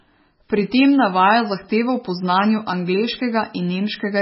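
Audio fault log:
Throughout: MP3 compression. The speech sounds watery and swirly, with nothing above 5.6 kHz, likely from a starved encoder near 16 kbps zeroing weak frequency lines.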